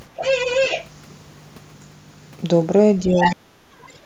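From 0.17 to 0.87 s a second voice runs under the speech at nearly the same level: the other side's voice leaking through, likely loudspeaker echo the canceller failed to remove. It is an added voice, not a change in the talker's own. Around 3.03 to 3.16 s the talker dips slightly, speech suppressed in double talk, likely the canceller turning down both sides while they overlap. From 3.17 to 3.36 s the leak returns, and at 3.35 to 3.4 s the talker's voice is cut deeply and briefly. Here the speech itself drops out rather than gaining an intruder. A faint scrap of leakage follows at 3.86 to 3.98 s, far below the speech.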